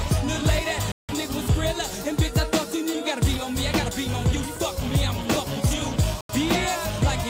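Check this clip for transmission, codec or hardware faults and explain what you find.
Two digital broadcast dropouts. At 0.92 to 1.14 s and 6.21 to 6.34 s, the receiver lost lock or rejected corrupted frames and muted until valid ones arrived. The sound cuts to silence for about 170 ms, which fits roughly four lost frames, then about 85 ms, which fits roughly two, and that audio is gone.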